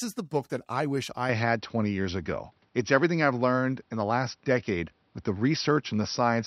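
At 1.29 s the speech turns duller and boxier, with nothing above 5.8 kHz from there to the end. The level shifts by roughly 5 dB and a faint new noise floor appears. There is no gap. The likely cause is the input switched to a poorer device.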